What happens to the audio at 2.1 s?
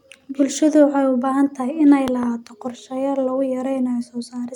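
A loud pop, two sharp thumps between 2.08 and 2.25 s, peaking about 10 dB above the speech, which carries on beneath them, just before "qorshayaal lagu". A sudden voltage step, likely from a switch or static discharge, caused it. The waveform shows two tall spikes, and the spectrogram shows two thin, full-height vertical lines.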